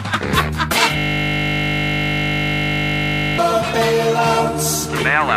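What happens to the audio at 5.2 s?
Nothing goes wrong at 5.2 s; the audio plays through that point intact, with no dropout, click or distortion.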